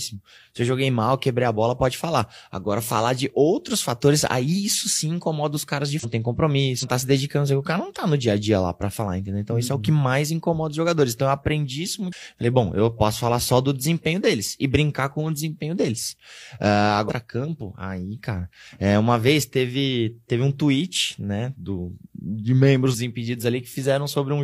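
Right after "incomoda os caras de", at 5.99 s, the speech hits a short blip of damaged data in the compressed stream. It recurs at 6.78 s just before "tá se dedicando que", at 12.08 s after "eu aprendi isso", then at 17.05 s and 22.90 s. Each lasts about 50 to 60 ms. Corrupted bytes throw the decoder off, so it garbles those frames and has to hunt for the next valid header, which yields a brief glitch.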